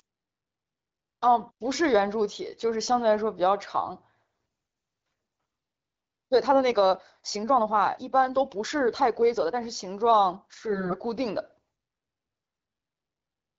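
At 4.31 to 4.45 s the speech turns hoarse and gargly for a moment while its pitch and loudness hold. These are AMR bit errors: a few percent of the weakly protected bits in a short run of frames arrived flipped, so the excitation pulses and the finer pitch, gain and spectral values decode wrong. On a spectrogram the harmonic striations break into smeared, noisy texture, and the waveform stays at the same level but loses its regular periodic shape.

From 5.06 to 9.58 s the pace jumps abruptly to 1.54 times normal speed with no rise in pitch, and the sound turns rushed. This is a time-stretched section, most likely from software that squeezed the audio to fit a length by dropping short pieces. The spectrogram shows compressed syllable spacing with unchanged harmonic spacing, and the waveform has small discontinuities at the splice points.

The same bit-error roughness comes back at 10.70 to 10.95 s and 12.49 to 12.73 s, again with level and pitch intact. 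Under all of this the AMR wideband (HD Voice) codec keeps its light band-limited character, with energy thinning out toward 7 kHz.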